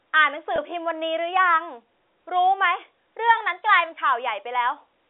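At 0.56 to 0.58 s, packet loss with pitch repetition: a gap fitting one lost 20 ms packet is bridged by repeating the last pitch period, heard as a briefly held, buzzy tone. From 3.37 to 3.92 s, the sound speeds up by about 5.8% and rises nearly a semitone (98 cents) before snapping back, likely a drift correction step changing the playback rate. All of this plays through the narrow 300 Hz to 3.6 kHz band of G.711 telephone coding.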